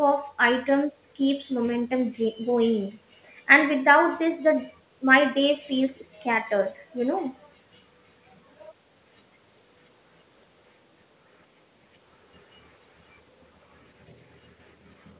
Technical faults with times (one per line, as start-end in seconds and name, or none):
none